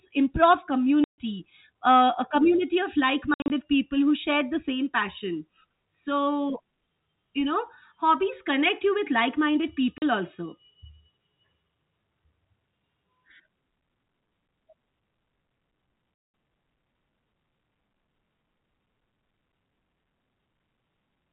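Telephone-band speech through G.711 telephone coding, with packet loss filled with silence: hard-edged dropouts at 1.04–1.18 s, at 3.34–3.50 s just after "uh a community of" (scattered gaps, longest 60 ms), at 9.98–10.02 s, and around 16.16 s (200 ms). The hole lengths are all multiples of 20 ms, which fits lost 20 ms packets replaced by silence.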